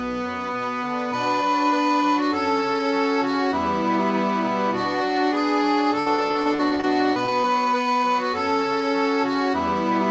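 From 6.00 to 7.45 s, repeated packet loss gives a choppy, robotic sound. About a dozen short holes, each up to 60 ms, are patched by stretching the preceding audio. The call path's 8 kHz band limit can also be heard.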